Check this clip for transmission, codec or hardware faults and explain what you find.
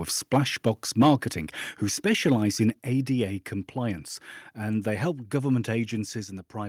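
Two faults are present: microphone overload and the microphone volume being stepped down.

Microphone overload occurs from 1.00 to 1.14 s. The loudest part of the speech there is distorted and crackly, with the tops of its waveform flattened. The likely cause is input gain set too high, driving the signal about 6 dB past what the converter can represent. Roughly a tenth of the samples in that stretch are cut off at the limit, and the missing peak shape adds the distortion.

Microphone volume stepped down occurs twice, at 1.02 s and at 2.70 s. The second is just after "who specialise". At each point, speech and background drop in level together and at once: by about 2 dB at 1.02 s, inside the overloaded stretch, and by about 5 dB at 2.70 s. The likely cause is the call software detecting an input that is too hot and lowering the device's input volume in a single step each time, rather than gradually.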